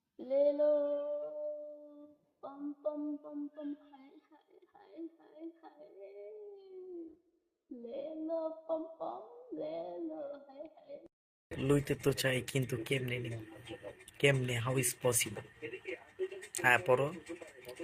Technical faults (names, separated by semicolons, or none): call bitrate drop